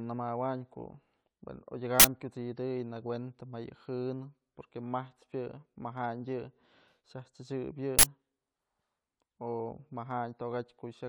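An uninitialised buffer breaks into the speech at 2.00 s and again at 7.99 s. Each time, roughly 46 ms of leftover memory plays out as samples before real audio fills the block, a length that fits a 2048-sample buffer, giving a sudden, loud burst of harsh digital noise.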